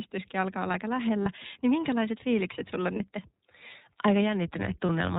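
Speech carried through the iLBC codec: band-limited to 4 kHz, with plainly audible rough, synthetic coding that fits the 13.33 kbps, 30 ms frame mode. Lost iLBC frames occur at 1.23 s after "alkaa olla aika", 2.96 s after "minkälaiset fiilikset sulla on", and 4.86 s. Each is a brief buzzy held sound as the decoder repeats the last pitch cycle over one missing frame, and the speech recovers immediately.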